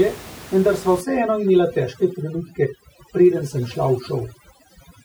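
From 1.01 s, just after "vendar sva", to the end of the speech, overdone noise removal sets in: the noise reduction is pushed so hard that any frequency band sitting close to its noise estimate is dragged down or shut off, taking the softer parts of the voice along. The room noise, about 17 dB below the speech, drops away and breaks up into twinkling artefacts.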